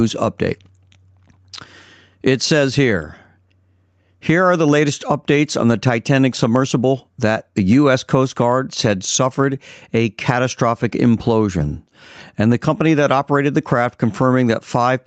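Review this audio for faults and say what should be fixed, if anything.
Gain pumping runs through the whole clip. The gain swings by around 10 dB, which squashes loud and soft parts together. The likely cause is input gain set far too high, with a fast limiter pulling it down on each peak. The top end stopping near 8 kHz fits the call codec's bandwidth. To prevent it, lower the microphone gain so peaks stay below the limiter's threshold.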